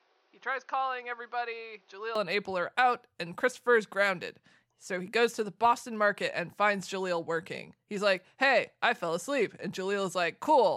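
From the start to about 2.15 s the speech sounds boxed-in and dull, with nothing above 6.6 kHz, and it sits noticeably quieter, roughly 10 dB down, over a faint background noise of its own, well below the speech. At 2.15 s it opens up cleanly with no gap. That pattern points to an input switched to a poorer device, likely a headset call profile or a lesser microphone, that then handed back to the main input.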